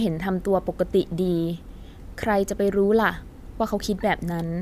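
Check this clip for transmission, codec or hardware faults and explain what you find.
No faults found; nothing in the speech points to any problem in the signal chain.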